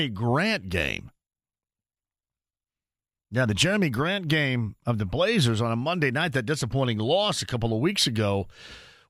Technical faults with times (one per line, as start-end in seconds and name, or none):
none